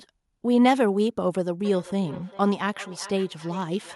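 Feedback echo between two devices from 1.65 s to the end: a second device replays this microphone's sound, which is picked up again, repeating roughly every 0.4 s at about -20 dB.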